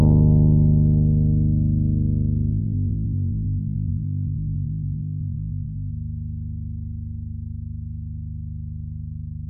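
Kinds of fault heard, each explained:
Time-stretched section: from 2.50 to 5.90 s the pace jumps abruptly to 1.89 times normal speed while the pitch stays exactly where it was, then drops back just as suddenly. The sound in that stretch comes across rushed. That combination points to a likely cause in software squeezing the passage to a shorter length, holding pitch steady by discarding short slices of the audio and joining the remainder.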